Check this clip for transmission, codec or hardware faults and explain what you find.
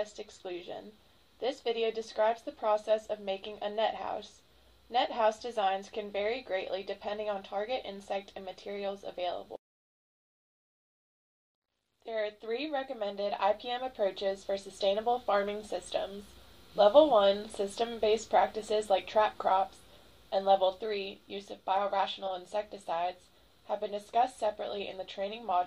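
One codec fault appears twice: a corrupt frame decoded at 12.01 s and at 22.25 to 22.30 s. Damaged compressed frames were played anyway. Misread data puts energy at wrong frequencies, heard as brief chirps or noise bursts. The second burst is louder, about -30 dBFS against about -55 dBFS.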